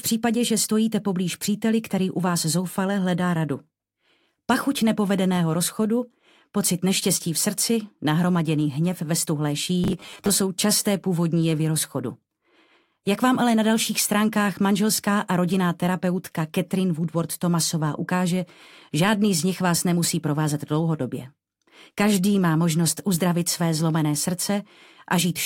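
From 9.84 to 10.31 s there is robotic sound from repeated short buffers. The audio turns into a rigid, metallic buzz at 100 Hz. That fits a 10 ms slice played again and again. The likely cause is audio arriving too late, with about half the passage repeated.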